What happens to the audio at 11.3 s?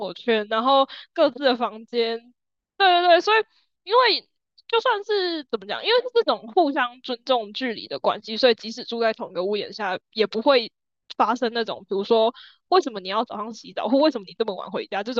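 At 11.3 s the speech carries on cleanly, with no dropout, click, distortion or other technical fault at that point.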